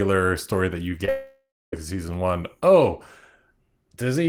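In this speech clip, about 20 ms of packets arrived too late for the decoder at 1.05 to 1.09 s, a short concealed packet loss that the receiver patched over, leaving a brief smear. Right after, a long network dropout likely cut off the stream from 1.09 to 1.74 s. Concealment stretched the last sound into a fading buzz or hiss, then about 270 ms of silence before speech resumed with the lost part gone.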